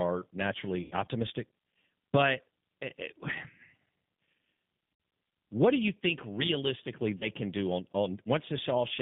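Throughout, the speech carries the G.729 codec at 8 kbit/s. The line band runs from about 150 Hz to 3.6 kHz, and rebuilding the voice from a vocal tract filter, pitch predictor and sparse pulses gives it a plainly audible rough, synthetic quality.

VoIP packet loss concealed by the speech codec occurs at 0.82–0.94 s, 4.94–5.00 s and 7.18–7.29 s, covering 90 ms, 60 ms and 30 ms of missing audio. At each gap the decoder extends its last pitch and filter into a buzzy tone or coloured noise that fades. Because the decoder's state carries over, the sound stays weak briefly after packets resume.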